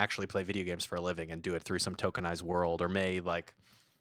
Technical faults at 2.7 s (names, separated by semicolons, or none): scattered short gaps